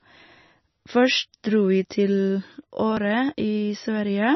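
Speech, with MP3 compression damage throughout. Nothing is heard above 5.9 kHz. The sound turns watery and swirly. A low bitrate near 25 kbps is the likely cause.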